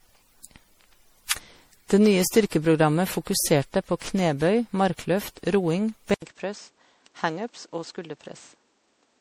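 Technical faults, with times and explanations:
Throughout: generation loss. The audio has most likely been decoded and re-encoded around seven times through a lossy MP3 stage, which fits a 64 kbit/s chain. Each pass quantises the signal on a shifted frame grid, so the errors pile up. The result is a swirly, smeared, hollow quality, with spectral holes and blurred attacks, worse than a single encode at that rate would give. Content still reaches up to about 20.5 kHz.
6.14–9.21 s: input switched to a poorer device. Right after "markløft roing" the system likely changed to a lesser microphone or a headset call profile. There is a silence of 80 ms at the changeover. After it, nothing passes above 8.3 kHz, so the sound turns dull and boxy. The level drops by about 5 dB, and a new background noise sits about 40 dB below the signal until the end.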